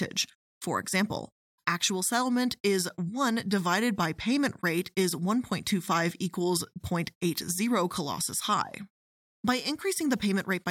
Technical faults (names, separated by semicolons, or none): none